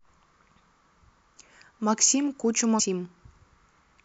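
At 2.76 s to 2.80 s, a brief burst of damaged data in a compressed stream interrupts the speech for roughly 40 ms. The bytes for that stretch of the encoded file are corrupt, so the decoder cannot interpret the affected frames correctly and loses its place in the bitstream until it locks onto the next valid frame header. What comes through is a short glitch, a chirp, squawk, click or short hole, in place of the speech.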